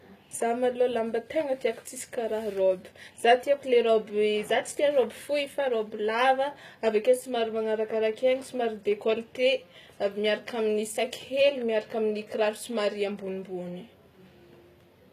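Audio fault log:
throughout, HE-AAC compression: the treble sounds bright but synthetic, with sibilants coming out gritty and lispy, a metallic sheen on the upper speech harmonics, and nothing at all above 14.9 kHz. This is likely HE-AAC at a low bitrate, in the region of 20 kbps. Only the lower spectrum is truly coded, and the highs are rebuilt by copying lower bands upward under a coarse envelope, so the upper harmonics no longer line up with the real ones.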